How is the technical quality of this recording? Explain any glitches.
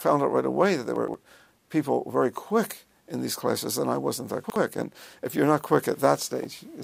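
Two glitches of chunks out of order, at 0.96 to 1.14 s and 4.44 to 4.56 s: a 60 ms chunk arrived late, playing two chunks and then one chunk after its place. The sound jumbles briefly.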